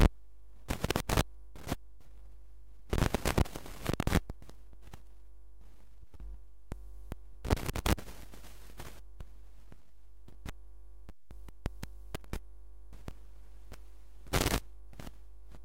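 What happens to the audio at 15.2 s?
Nothing changes audibly at 15.2 s; the sound carries on as before, because the fault present there is a DC offset that runs through the whole clip rather than an event at that moment. The entire waveform sits shifted off the zero line by a constant of about -45 dBFS. A fixed shift like this cannot be heard as a tone. It appears only as steady energy at the very bottom of the spectrum and slightly eats into the available headroom.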